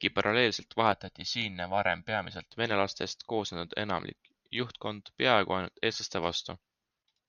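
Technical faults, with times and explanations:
0.92 to 2.52 s, channel delay (comb filtering): the speech turns hollow and phasey, with fixed dips starting around 400 Hz and repeating evenly upward. One channel lags the other by roughly a millisecond and a half, so the mono sum cancels their shared content at those spaced frequencies.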